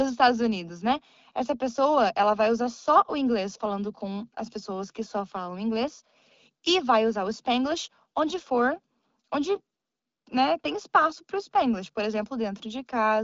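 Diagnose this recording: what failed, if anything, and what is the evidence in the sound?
Nothing has failed: the speech reaches the listener through an AMR wideband (HD Voice) link at 12.65 kbit/s, where the only trace of the codec is its light coding texture and a band edge near 7.3 kHz, above which no content remains.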